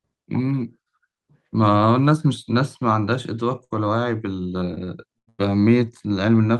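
A short stall from a late packet at 3.64–3.73 s: the jitter buffer ran dry, so the receiver held the last speech sound for about 63 ms, then resumed without loss.

Repeated stalls (stutter) from 4.75 to 5.41 s: packets kept arriving late, emptying the buffer four times. About 242 ms was filled, with the longest gap 97 ms, so the speech drags and stutters.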